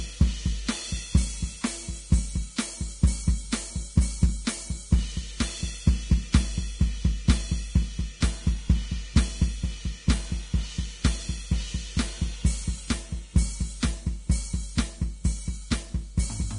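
From start to finish the music sounds hissy and grainy. Nothing comes through above 10.6 kHz, and the treble just below that cut-off has turned to a fizzy noise wash instead of real detail. Tones sound roughened and attacks are smeared. That's likely heavy Vorbis compression: the encoder drops the top band and quantises the remaining highs so coarsely that detail becomes noise of similar energy. The amount of damage fits a bitrate around 31 kbps.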